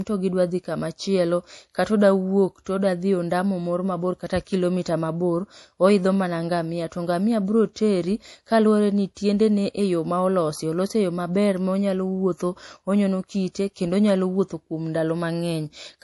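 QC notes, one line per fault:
Throughout, MP3 compression: the speech has nothing above 11.5 kHz, and the remaining top end is plainly watery and swirly, with sibilants chirping and smearing. A simple low-pass filter would dull the sound evenly. Here, faint detail flickers in and out from moment to moment. That pattern comes from an encoder zeroing weak frequency lines frame by frame to save bits, and it likely points to MP3 encoding at a low rate, fitting roughly 48 kbps.
2.64 s, and 9.15 to 9.17 s, pre-echo: a brief hiss lasting about 19 to 20 ms comes just ahead of a sharp onset, and the attack itself sounds softened. The first falls between "dhi kamachielo katoda wuok" and "todadhi ondamo moro mabor", and the second comes just after "kaluwore ni". The codec spread its noise across the whole block, so noise sized for the loud attack spills into the quiet moment before it. A click would be a single sharp tick, whereas this is a smear of noise that leads into the attack.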